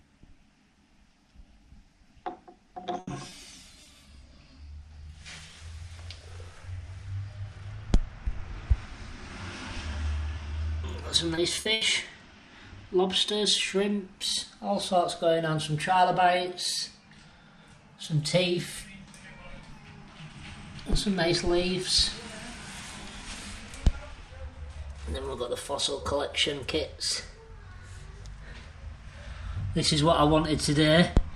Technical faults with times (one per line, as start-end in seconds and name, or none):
2.99-3.09 burst of packet loss
3.29-3.33 short concealed packet loss
3.83-3.87 short concealed packet loss
11.35-11.83 repeated packet loss (robotic sound)